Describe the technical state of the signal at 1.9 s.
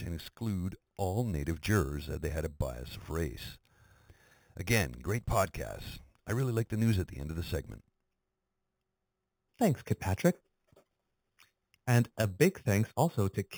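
At 1.9 s, as throughout, imaging from sample-and-hold upsampling: 8 kHz audio held up to 48 kHz leaves mirrored copies from 4 to 8 kHz, about 18 dB down, a metallic fizz.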